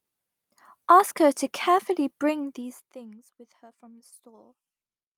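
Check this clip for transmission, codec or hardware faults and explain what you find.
One transmission fault shows up, from 2.61 to 2.63 s in this speech: a lost packet rebuilt from error correction. It sounds like a single dropped packet. The next packet carried a low-bitrate copy, so the decoder filled those 20 ms with no gap, but the patch comes out rougher and noisier.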